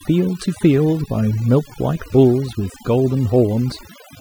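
A noise reducer applied far too aggressively to a noisy speech recording has damaged the whole clip. Wherever a frequency band sat close to its noise estimate, the processor pulled that band down hard or shut it off, and it took the quieter parts of the voice along with the noise. The gaps between phrases collapse into near silence scattered with twinkling specks: a textbook case of overdone noise removal.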